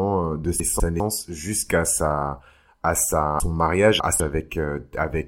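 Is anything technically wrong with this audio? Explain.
Yes, the speech has chunks out of order. Around 0.6 to 1.0 s one 200 ms chunk plays a slot late, and from 3.4 to 4.2 s another lands three slots late, so each spot sounds jumbled.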